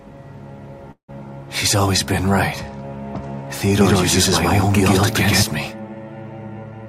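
A call audio freeze at 0.91 to 1.10 s stretches the last sound into a fading buzz, then 100 ms of silence, before the audio resumes intact, likely because delayed packets emptied the jitter buffer. From 3.81 to 5.43 s a doubled audio track appears: a full-band copy, about as loud as the original, trails by roughly a tenth of a second, starting and stopping abruptly. At 6.48 to 6.86 s a jitter buffer speed-up trims short pitch-period pieces, around 50 ms in total, so the audio runs at 112% speed without any change in pitch.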